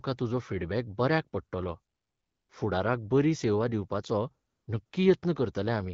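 From 1.95 to 2.49 s, just after "बऱ्याक पडटलो", and again at 4.47 to 4.67 s and 4.85 to 4.91 s, the background turns into a smooth, steady hiss. This is AMR comfort noise: the phone judged the talker silent and stopped sending speech frames, and the receiver substituted synthetic noise.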